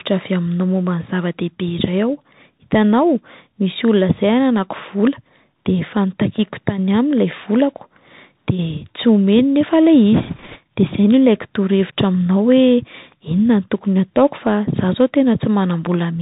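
Bluetooth CVSD headset codec, throughout: the speech passes through a one-bit delta coder, which fits a 64 kbps stream, so everything above 4 kHz is gone. Sibilants turn scratchy, and a granular hiss sits underneath. Bit errors on a Bluetooth voice link, from 10.14 to 10.59 s: a few percent of the bits flip, and because each carries little weight, a rushing crackle appears rather than sharp clicks.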